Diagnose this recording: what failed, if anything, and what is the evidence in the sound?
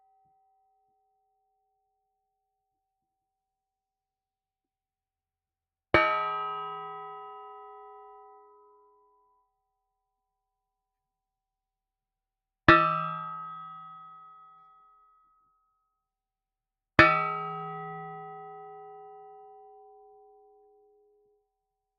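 The failure is in call processing: a noise suppressor built for speech is running on non-speech sound. Throughout the clip the level of steady and sustained material swings by roughly 20 dB as the suppressor decides what counts as noise. Onsets get through, but held tones, ambience and decay tails are pulled down, so the sound pumps and thins. The suppressor's gain tracks its noise estimate rather than the sound itself.

The same noise suppressor also produces distinct cuts where it treats the sound as noise and attenuates it harder than the rest. From 0.0 to 2.12 s, for about two seconds, the level sinks by up to about 22 dB. It drops the same amount again from 8.61 to 9.61 s, across roughly one second. A shallower dip of about 6 dB follows from 20.8 to 21.03 s. Sustained or fading content is hit hardest, with tails cut short.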